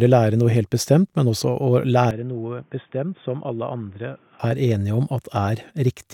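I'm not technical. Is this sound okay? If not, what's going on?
No. From 2.11 s to 4.40 s the speech suddenly turns dull and boxy, gets noticeably quieter, and picks up a faint background noise of its own, then snaps back to normal. There is no gap at either change. This is most likely an input switched to a poorer device, such as another microphone or a headset's call mode, which carries nothing above about 3.6 kHz, so the crisp upper part of the speech disappears for those two seconds.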